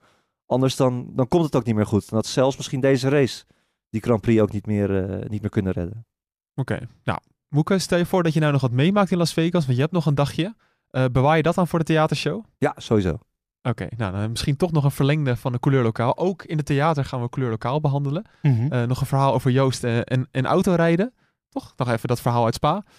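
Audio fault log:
Nothing to log here, since no faults turn up anywhere in this speech recording.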